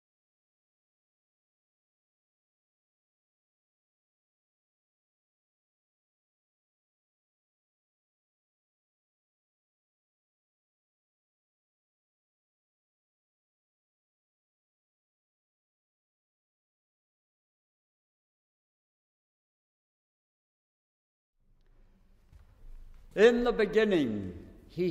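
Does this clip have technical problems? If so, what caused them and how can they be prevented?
No, the signal shows no technical faults at any point, so there is nothing here that needs preventing.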